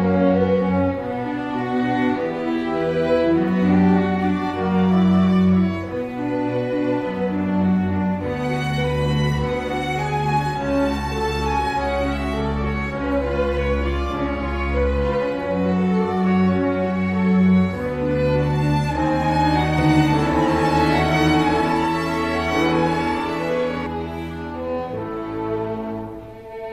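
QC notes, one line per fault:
19.78–23.86 s doubled audio track: a full-band copy trails about one and a half seconds behind at equal loudness, likely a slower second capture path.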